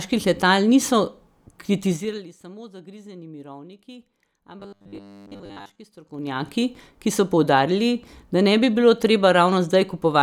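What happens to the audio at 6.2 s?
Zipper noise, 5.97 to 6.49 s, before "ki so poudarili": the level shifts about 20 dB in unsmoothed 2 dB steps that tick, unlike a smooth fade.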